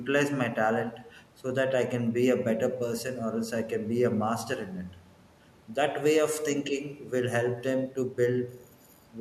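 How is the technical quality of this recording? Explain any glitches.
No technical glitches can be heard anywhere in this speech recording. Nothing in the signal stands out as a fault that needs explaining.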